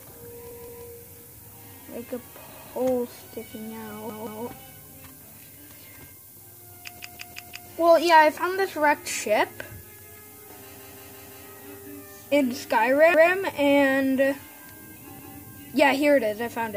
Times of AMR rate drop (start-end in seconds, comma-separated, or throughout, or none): none